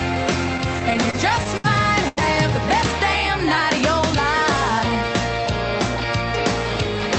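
From 0.57 to 1.66 s the audio drags and stutters. Nine times the sound hangs on itself, stretched rather than cut, with the longest hold about 69 ms and around 167 ms of filler in all, roughly 15 percent of that stretch. These repeated stalls (stutter) mean packets kept arriving late, so the jitter buffer ran dry again and again and the receiver extended the last sound each time until it could resume, losing nothing.

Between 2.08 and 2.19 s a single sound is held too long, about 89 ms, with a faint buzz or dip. This short stall from a late packet happened when one packet missed its slot and the buffer emptied. The receiver prolonged what it had, then continued from the same point once the packet arrived, matching a delay jump of about 89 ms. Throughout, the audio tops out near 8 kHz, which fits an Opus call path.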